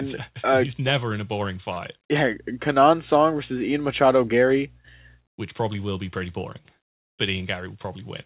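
A short stall from a late packet at 1.74 to 1.78 s, just after "never in a boring": the jitter buffer ran dry and the receiver held the last sound about 22 ms until the packet arrived, losing nothing. A jitter buffer speed-up from 7.41 to 7.85 s, after "be pretty boring but": the receiver trimmed pitch-period slices, roughly 40 ms in total, so the speech runs about 7% faster at unchanged pitch. Throughout, the call path's narrow band, with nothing above 4 kHz, points to a 64 kbps G.711 mu-law codec.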